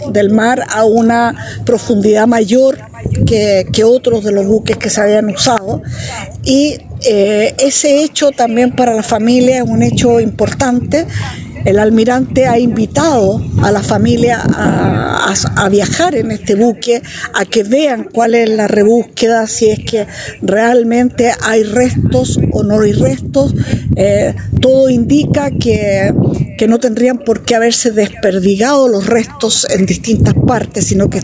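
Gain pumping runs throughout, likely from input gain set far too high with a fast limiter pulling it back; the gain swings by around 15 dB, under band-limited call processing ending near 8 kHz.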